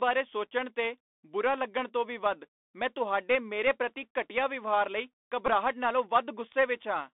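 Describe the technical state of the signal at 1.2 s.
At 1.2 s the speech is passing through a Bluetooth CVSD headset codec, as it does for the whole clip. The codec encodes each sample as a single up-or-down bit with an adapting step, which fits a 64 kbps stream. The band is confined to roughly 250 Hz to 3.6 kHz, and the coding damage is plainly audible as granular, scratchy coarseness.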